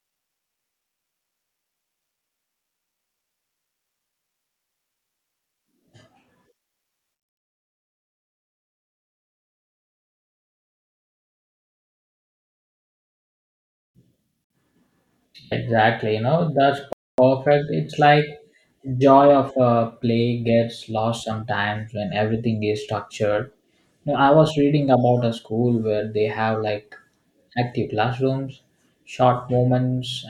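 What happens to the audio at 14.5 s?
A Bluetooth stall hits from 14.44 to 14.50 s: the speech drops to about 60 ms of silence, then resumes. This is likely a wireless dropout, where interference delayed packets, the headphones' buffer ran empty, and playback waited for the retransmitted data.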